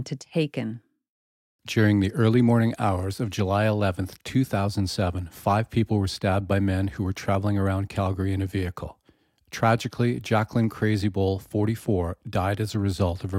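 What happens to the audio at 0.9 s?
Nothing goes wrong at 0.9 s; the speech there plays through intact, with no dropout, click or distortion.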